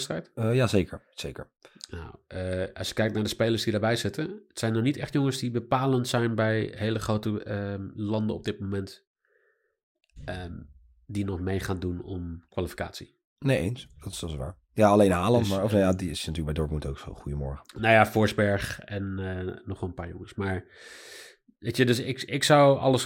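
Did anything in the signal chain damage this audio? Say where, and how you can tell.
No, nothing in the signal chain damaged this audio.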